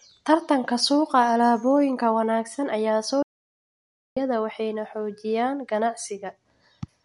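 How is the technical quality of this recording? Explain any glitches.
There's one real glitch here: an audio dropout to silence from 3.23 to 4.17 s, right after "wanaagsan ayaa soo". The speech just stops dead, and for roughly 0.94 s there's nothing at all, not even room tone, before it picks up again at "waxayna xoojiyaan". That silence likely means the input feed was lost while the recorder kept writing silence, so whatever was said in that gap is simply gone.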